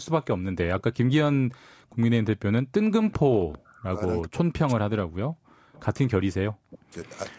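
Speech over a call path, with an echo leak at 1.91–1.96, 3.10–3.14, 3.51–3.75 and 5.73–5.84 s: a faint copy of the far-end voice arriving 393 ms late, around 20 to 30 dB down, likely from incomplete echo cancellation. Speech suppressed in double talk follows at 3.58–4.01, 4.25–5.47, 6.44–6.97 and from 7.35 s to the end, where the near-end voice drops by up to roughly 40 dB in chunks, likely because the canceller attenuated it along with the echo.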